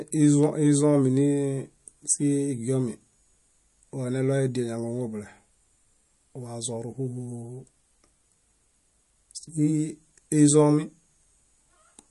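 Throughout the speech, nothing sounds above 11.3 kHz, and weak frequency detail flickers in and out, giving a watery swirl. That pairing points to MP3 compression, likely at a low bitrate near 48 kbps. A plain low-pass filter would dull the treble without the swirl.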